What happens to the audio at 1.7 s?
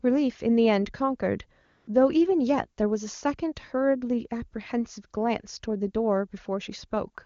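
From 1.65 to 1.87 s, about 220 ms, AMR comfort noise takes over. The phone stopped sending speech frames and the receiver synthesised a smooth, steady hiss in place of the real background. On a spectrogram this appears as a flat, featureless band with sharp edges, and the waveform shows an even low-level fill.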